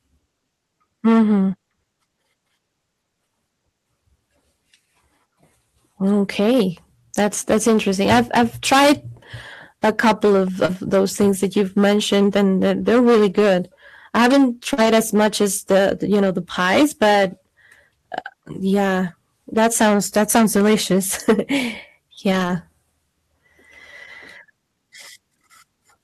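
Hard clipping runs through the whole speech clip: the level sits about 18 dB beyond what a stage could pass, so around one sample in twenty is cut flat. Every loud syllable gets a harsh, buzzy fuzz, unlike soft saturation, which rounds peaks warmly instead.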